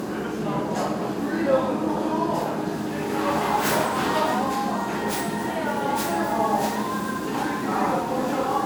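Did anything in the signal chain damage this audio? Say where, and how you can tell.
Yes, at the codec stage, and the damage runs through the whole clip. The audio sounds swirly and hollow, with a smeared high end and blurred attacks. That is more damage than a single encode at a moderate bitrate would leave. The pattern fits generation loss, most likely from MP3 coding repeated about five times at a rate near 128 kbit/s. Each pass requantises on a shifted frame grid, so noise and spectral holes pile up.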